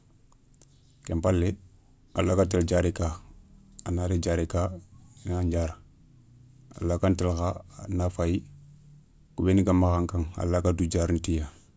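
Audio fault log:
No faults heard anywhere in the speech.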